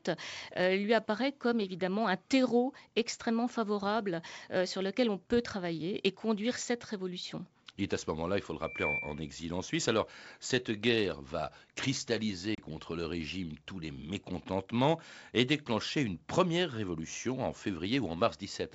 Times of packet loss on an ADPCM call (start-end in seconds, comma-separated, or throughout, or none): 12.55-12.59